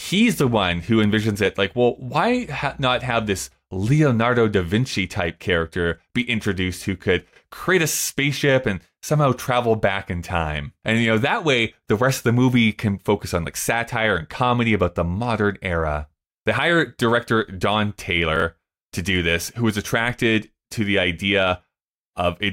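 At 18.36 to 18.42 s the speech has chunks out of order: one 20 ms chunk plays two chunks late, after the two that should follow it. Nothing is missing, but the sequence is scrambled, producing a brief jumbled stutter with three hard joins.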